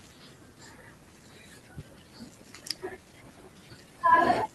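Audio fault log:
1.63–1.65 s skip ahead: Playback jumps forward by about a second of speech with no silence or fill at the join, so the two sides of the cut butt almost directly together. Waiting audio was discarded rather than played, which cuts the listening delay by roughly that second. Unlike a dropout or packet-loss gap, nothing goes quiet and nothing is smeared or repeated. The speech simply lurches ahead mid-flow, and its timing across the cut no longer lines up.
1.73–4.55 s jitter buffer speed-up: From just after the jump to the end, the speech runs at about 110% speed while its pitch stays where it was. Short slices of a pitch period or a few are removed again and again to drain excess buffered audio, about a third of a second in total. That keeps pitch intact, so it differs from a sample-rate or clock mismatch, where speeding up would also raise the pitch. The result sounds hurried, without sounding higher.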